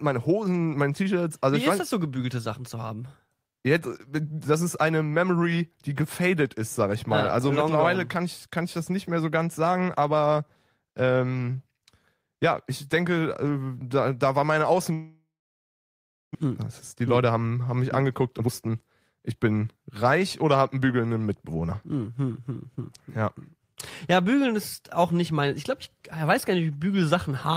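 From 14.93 to 16.45 s the stream most likely suffered a long network dropout: packets stopped arriving, and the receiver had nothing to play. It first stretches the last sound into a fading buzz, then leaves roughly a second of silence, and when audio resumes about a second of the speech is simply gone, skipped over rather than delayed.

The late packets left the jitter buffer holding about 0.4 s more audio than it wants, so the receiver then trims it down. This jitter buffer speed-up cuts out short pitch-period slices repeatedly: from 17.01 to 17.51 s it plays at 110% speed, dropping around 50 ms, and from 18.09 to 19.77 s at 119%, dropping around 300 ms. The pitch stays put, but the speech sounds rushed along both stretches.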